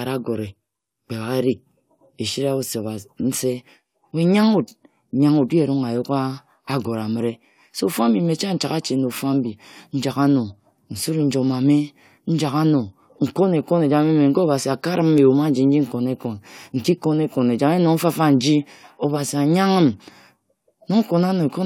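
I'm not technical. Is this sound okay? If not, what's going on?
Yes, this sound is okay; nothing is going wrong with it.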